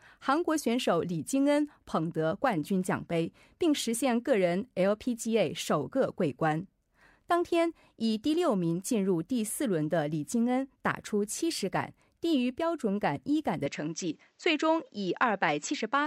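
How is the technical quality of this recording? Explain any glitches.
The recording has one clear fault, an input switched to a poorer device, starting at 13.66 s and lasting to the end. The input most likely changed to a lower-grade microphone path, so from that point nothing passes above 7.8 kHz, dulling the speech without a gap or a jump in level. A faint new noise floor appears well below the signal. On a spectrogram, the high band cuts off abruptly at 13.66 s, while the waveform's envelope looks unchanged.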